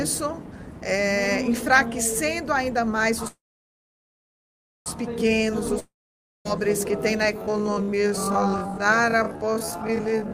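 At 3.27 s the audio stalls in a call audio freeze lasting until 4.88 s. The last sound is carried on briefly as a fading buzz, then about 1.5 s of near-silence follows. The likely cause is delayed packets draining the jitter buffer. When sound resumes it picks up exactly where it stopped, with nothing missing, so everything after it is pushed about 1.6 s later. That intact continuation is what separates it from a dropout.

From 5.79 s to 6.47 s comes a long network dropout. The fading fill and roughly 0.56 s of silence resemble the freeze, but here the audio was likely lost in transit rather than held back. When sound returns it has jumped ahead. About 0.66 s of material is gone, and the timeline does not slip later. Listening for that skipped stretch at the resumption point is the clearest way to tell it from the earlier stall.

At 7.34 s a time-stretched section begins and runs to the end. 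The pace abruptly drops to about half speed, 0.52 times the original rate, yet the pitch stays put. The likely cause is software repeating short pieces to lengthen the audio. The unchanged pitch rules out a playback-rate slowdown, which would lower the pitch along with the pace.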